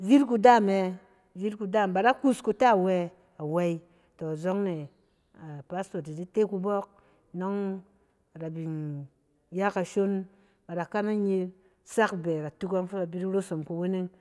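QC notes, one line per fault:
No fault to note in this QC pass.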